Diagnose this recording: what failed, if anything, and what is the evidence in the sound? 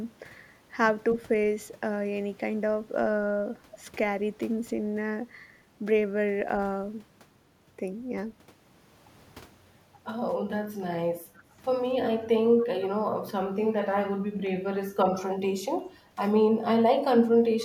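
The speech briefly sinks in short dips at 10.78–10.83, 12.44–12.48, 12.99–13.04, 14.43–14.51 and 16.16–16.20 s, each a few tens of milliseconds and about 10 to 20 dB down. This is likely speech suppressed in double talk: call processing's echo canceller ducked the near talker while the far side spoke.

At 12.58–12.64 s a faint, delayed copy of the voice surfaces, lagging by 282 ms and sitting about 25 dB below the speech. This points to an echo leak in call processing: the loudspeaker's sound reached the microphone and the canceller failed to remove it fully.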